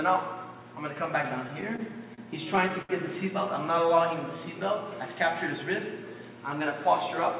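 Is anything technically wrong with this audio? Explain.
Yes, there are three timing faults, heard through a call path that leaves nothing above 4 kHz, which fits narrowband G.711.

From 1.48 to 2.20 s there are repeated stalls (stutter). Packets arrived late four times, so the receiver padded the gaps, the longest 33 ms. On a spectrogram this shows as brief smeared, flattened columns.

From 2.82 to 2.91 s there is a short stall from a late packet. The last sound is held for 72 ms. It shows as a horizontally stretched band with a slight dip in the waveform envelope.

From 3.72 to 4.38 s there is a jitter buffer slow-down. Repeated pitch periods add 42 ms, so the audio plays at about 95% speed. It appears as a slightly elongated section with repeated cycles in the waveform.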